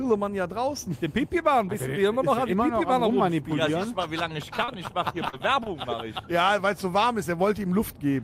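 From 4.57 to 4.89 s, repeated packet loss leaves four short gaps, the longest 30 ms, patched by looping the previous sound. The result is choppy and robotic, with smeared, repeating spectrogram slices.

Short concealed packet loss follows at 5.29 s, with a delay shift of about 20 ms, and again at 5.64 s: brief synthesized fills that continue the last sound before blending back into the real audio.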